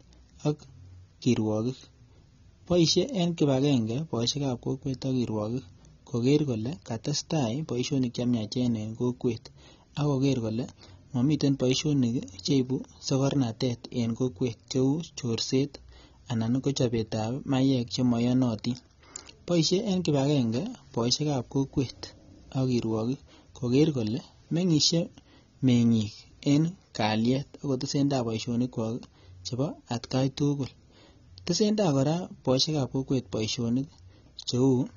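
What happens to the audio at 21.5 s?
At 21.5 s the speech sounds dull and smeared, with nothing above 7.6 kHz, throughout the clip. This is likely AAC compression: heavy quantisation and a lowered cut-off, consistent with a low-bitrate AAC-LC encode around 24 kbps.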